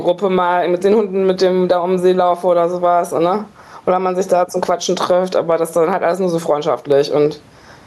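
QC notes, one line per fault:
Throughout, gain pumping: input gain was likely set too high, with a fast limiter clamping every loud sound, so level swings by around 10 dB. Room noise sits about 41 dB below the speech, and the dynamics are squashed.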